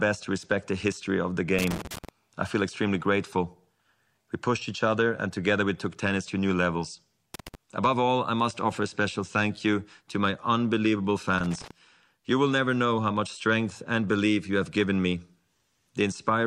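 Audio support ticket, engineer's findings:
Loose connector crackle, speech clip. Worn or dirty contact in the signal path, most probably a cable plug or jack, intermittently making and breaking under movement. Signal chopped on each break. Three irregular bursts of scratchy crackle: 1.59–2.09 s (about half a second), 7.34–7.55 s, 11.38–11.71 s. Reseat or clean connector; replace cable if bursts persist.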